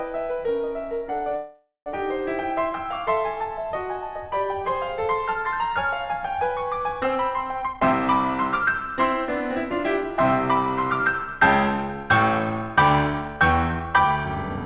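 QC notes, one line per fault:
1.36–1.89 s, call audio freeze: The music stops moving and its last sound is drawn out as a fading buzz for about half a second, falling to near silence for roughly 170 ms. It then picks up exactly where it left off, so nothing is lost but everything after arrives about 0.5 s late. This was likely caused by delayed packets leaving the jitter buffer empty, so the receiver filled the wait with its own decaying sound.
7.62–7.93 s and 11.02–14.64 s, jitter buffer speed-up: The music rushes ahead with its pitch unchanged. In the first burst it plays at 184% speed and lurches forward. In the second it drifts slightly fast at 106% until the end, and the tempo loses its steadiness. The receiver had built up surplus delay and cut many tiny pitch-period slices to shed it, about a third of a second in the first stretch and about a fifth in the second.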